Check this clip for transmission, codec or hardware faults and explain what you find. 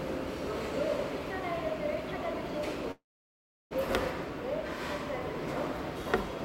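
There is one fault, a call audio freeze, from 2.91 to 3.73 s. The sound stops moving forward. A brief buzzy continuation of the last sound fades out. Then about 0.69 s of silence follows. The cause is likely packets held up in transit, leaving the jitter buffer empty. The receiver filled about 0.79 s on its own. Playback then resumes where it stopped, with nothing lost. Everything after runs about 0.79 s late.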